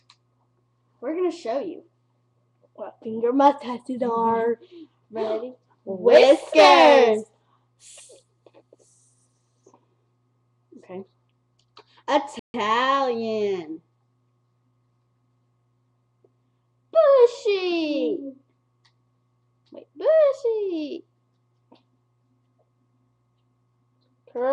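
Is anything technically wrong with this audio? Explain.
Yes. There is a playback stall from 12.39 s to 12.54 s. The sound cuts to silence in mid-flow for about 147 ms and then resumes. The likely cause is the player running out of buffered data, or its playback thread being blocked, so no samples reached the output until it recovered. The result is a short, abrupt hole in the audio that reads as a hiccup rather than a natural pause.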